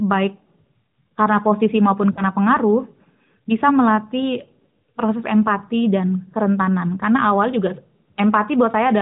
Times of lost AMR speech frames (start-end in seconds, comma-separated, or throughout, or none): 2.12-2.23